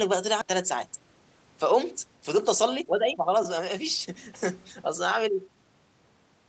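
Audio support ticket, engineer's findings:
Skip ahead, 0.41–0.43 s. Speech jumps forward with no fill; roughly a second of audio missing, sides joined almost directly. Jitter buffer likely dropped a waiting stretch on overflow, cutting delay by about a second.

Jitter buffer speed-up, 2.03–5.57 s. Speech runs at 113% speed, pitch unchanged, sounds hurried. Buffer over target; receiver repeatedly cut short pitch-period chunks, roughly half a second removed in total. Opus band limit at 8 kHz throughout.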